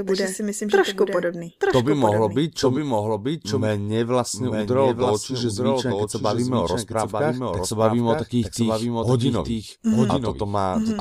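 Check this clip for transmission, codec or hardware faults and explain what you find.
One fault runs through the whole speech clip. Doubled audio track, throughout: the signal was likely captured a second time over a slower path. A full-band copy trails the original by about a second and sits a few decibels quieter, with no decay or room colour, so it is heard as a clean, overlapping repeat of the speech.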